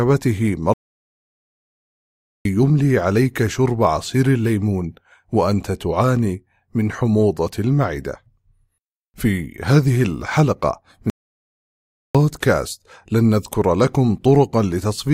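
At 0.74 s and again at 11.10 s the speech halts mid-flow in a playback stall, silent for 1.7 s and 1.05 s, likely from the player starving, then resuming.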